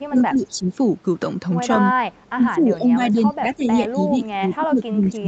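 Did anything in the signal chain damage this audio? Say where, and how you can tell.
Yes, at the call-processing stage. The speech level sinks from 0.09 to 0.67 s, for about half a second in all and by as much as about 15 dB, and again from 2.29 s to the end, by up to about 20 dB. The likely cause is speech suppressed in double talk: the echo canceller mistook the near talker for loudspeaker echo and attenuated both. On a waveform the envelope shrinks in patches; on a spectrogram, already empty above 8 kHz, the upper harmonics thin or vanish in those stretches.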